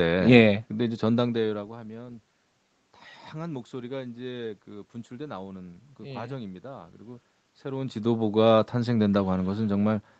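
No technical faults occur at any point in this speech clip, so there is nothing to place in time order.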